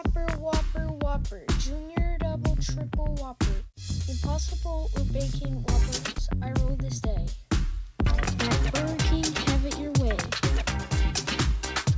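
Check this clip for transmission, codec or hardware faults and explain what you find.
Nothing here sounds amiss, just an ordinary call path whose sound tops out around 8 kHz, which fits a wideband codec such as G.722 at 64 kbps doing its usual job.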